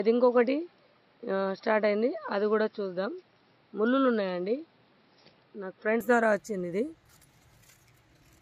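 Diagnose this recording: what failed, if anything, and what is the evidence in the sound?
Input switched to a poorer device, likely at driver stage: until 6.0 s the spectrogram stops flat at 5.6 kHz, then widens without waveform gap.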